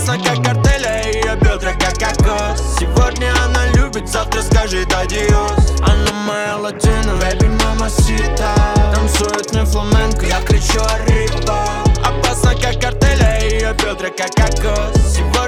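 At 7.16 s there's a small jump forward in the sound, most likely a dropped buffer (overrun): the program didn't pull its samples before the hardware overwrote them, so around 15 ms vanished and the two sides got spliced together with no gap.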